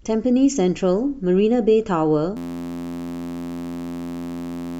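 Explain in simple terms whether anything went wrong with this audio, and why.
Something went wrong at 2.37 seconds. The speech suddenly turns into a steady, flat buzz that lasts until the end, at 4.80 seconds. This is a system hang loop. The computer froze, but the sound hardware kept replaying the last tiny piece of audio it held. That piece is only 11.6 milliseconds long, so it repeats about 86 times a second. That rapid repetition is the buzz you hear. The loop length fits a 512-sample buffer. About two seconds of speech are lost.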